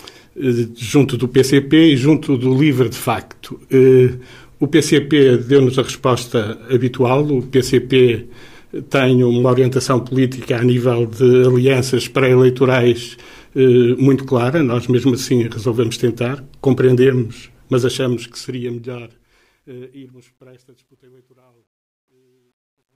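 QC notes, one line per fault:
17.62–22.95 s, truncation distortion on a fade: as the fade-out approaches silence, the level drops in steps that are too coarse and no dither masks them. The low-level waveform collapses into a few square steps, roughly what an 11-bit path would produce. From about 20.2 s to the end, the tail turns gritty.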